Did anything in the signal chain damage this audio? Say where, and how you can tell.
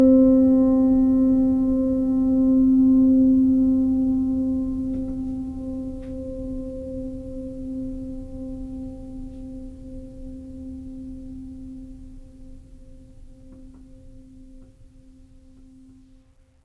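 No signal-chain faults are audible.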